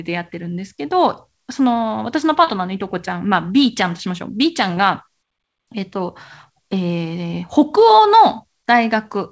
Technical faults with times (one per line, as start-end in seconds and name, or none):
2.44-2.49 short concealed packet loss
4.75-4.79 short concealed packet loss